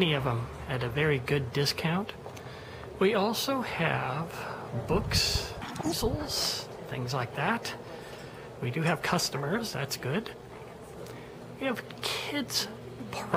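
Between 5.62 and 5.93 s the audio was read two samples at a time, so each pair of samples was treated as a single frame. That section plays at 2.0 times speed and jumps an octave higher.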